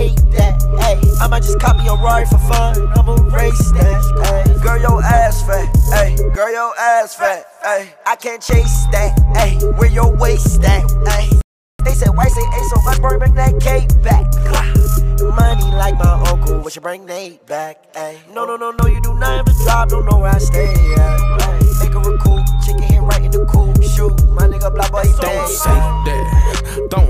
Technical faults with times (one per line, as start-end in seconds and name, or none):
11.41-11.79 playback stall
11.79-13.31 time-compressed catch-up